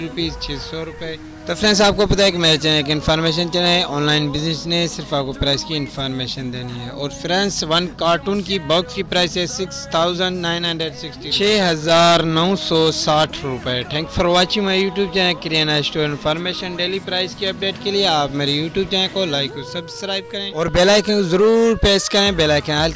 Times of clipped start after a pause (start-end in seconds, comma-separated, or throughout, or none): none